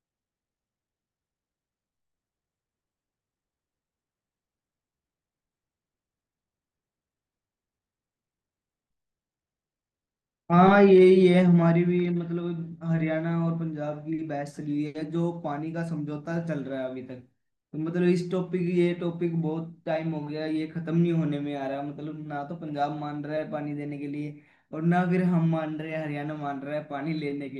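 Nothing is technically wrong with this speech recording.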